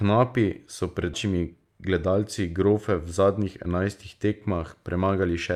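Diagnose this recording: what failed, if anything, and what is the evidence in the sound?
The network and jitter-buffer stage failed. At 1.13 to 1.15 s there is a skip ahead: the speech jumps forward with no fill, losing roughly 0.4 s of material, and the two sides are butted together almost directly. The buffer discarded audio that had queued behind a delay, cutting latency by about that amount. On a spectrogram, formant tracks and harmonics change abruptly at a vertical seam, and the waveform shows a sudden envelope discontinuity with no silent gap.

Right after, from 1.25 to 2.44 s, a jitter buffer speed-up runs the speech at about 110% with unchanged pitch, so it sounds hurried. The buffer was still holding more audio than its target and trimmed short pitch-period-sized pieces repeatedly, removing around 150 ms in total. A spectrogram shows compressed syllable durations and steeper formant transitions with harmonic spacing unchanged. 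The waveform shows tighter syllable envelopes, and whole periodic cycles are missing at the many splice points.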